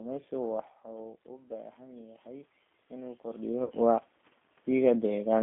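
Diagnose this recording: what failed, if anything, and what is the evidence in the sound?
The codec stage is the first culprit: the whole clip has G.729 coding damage. Nothing gets through below about 250 Hz or above 3.5 kHz, and the speech sounds rough and a bit synthetic. That fits an 8 kbit/s model-based coder rebuilding the voice from pitch and filter parameters.

In call processing, automatic gain rising kicks in from 0.84 to 3.84 s. The voice and room noise swell together by about 10 dB after the level at the mic drops about 13 dB, around when the talker moves back. The AGC is slowly chasing the quieter input.

The network is the third problem: VoIP packet loss concealed by the speech codec at 3.64 to 3.72 s. Roughly 60 ms of audio goes missing, which fits about six lost frames. The decoder fills the gap by stretching the last sound into a buzzy tone or coloured noise that fades, and the sound stays weak for a moment afterward.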